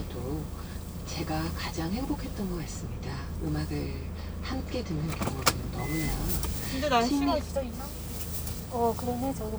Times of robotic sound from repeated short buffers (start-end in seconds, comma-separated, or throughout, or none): none